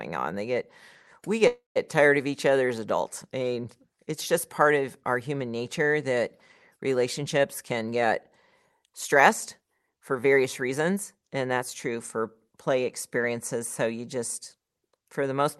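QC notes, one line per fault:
1.47–1.78 s, call audio freeze: after "get we", the incoming packets were likely held up in transit and the jitter buffer ran dry. The receiver stretched the last sound into a fading buzz or hiss for about 0.28 s, with roughly 0.15 s of that falling to silence. Speech then resumes at "tired of each other" with nothing lost. A gap was inserted rather than audio dropped, so everything after this point plays about 0.28 s later.
7.43–8.03 s and 8.79–11.37 s, jitter buffer speed-up: the buffer was holding more audio than its target, so the receiver repeatedly cut out short pitch-period-sized slices to drain the excess. The first stretch runs at 113% speed and removes around a tenth of a second. The second runs at 108% and removes around a fifth of a second, ending just before "that's true for play". The pitch stays the same, but the speech sounds hurried.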